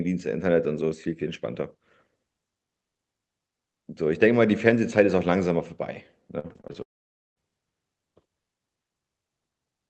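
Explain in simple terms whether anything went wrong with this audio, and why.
From 6.39 to 6.76 s there is repeated packet loss (robotic sound): six quick holes patched over, so the speech turns choppy with pieces missing rather than stopping outright.

Right after, from 6.82 to 7.38 s, the sound briefly smears, then goes silent for about half a second and returns with that part missing, likely a long network dropout, one long break rather than many small ones.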